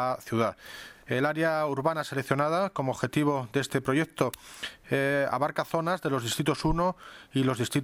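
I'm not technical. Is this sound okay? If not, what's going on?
Yes, nothing wrong can be heard in this sound.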